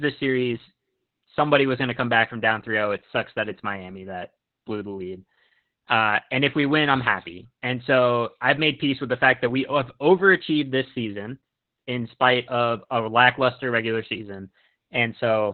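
Opus voice compression runs through the whole clip, from start to finish. The speech passes through the codec's SILK linear-prediction coder in narrowband mode, so nothing survives above 4.3 kHz. The excitation is coded very coarsely, which fits a bitrate around 8 kbps with 20 ms frames. The damage is heavy. The voice sounds muffled and telephone-thin, with a hoarse, slightly robotic edge and no crisp high consonant detail.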